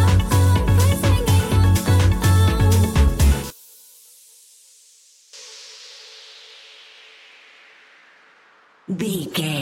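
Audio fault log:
3.50–5.33 s, one channel inverted: the sound abruptly drops by about 12 dB, with the centred content largely gone, then returns to full level at 5.33 s. The likely cause is reversed polarity on one stereo channel, so whatever the two channels share cancels when they are summed to mono, and only the weaker difference between them survives for those 1.8 seconds.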